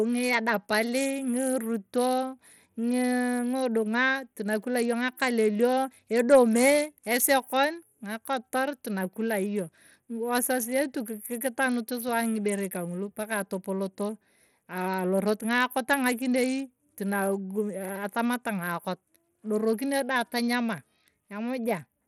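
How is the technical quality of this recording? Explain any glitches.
Bluetooth SBC compression, likely the cause of the damage heard across the whole speech clip from start to finish, plainly degrades its technical quality. SBC splits the signal into a few wide frequency bands and shares out a small bit budget with no model of hearing, so the weak upper bands are starved and everything is coarsely quantised. The result is gritty noise and flickering treble riding on the speech, with content still reaching about 20.6 kHz. The damage points to a low bitrate, around 80 kbps.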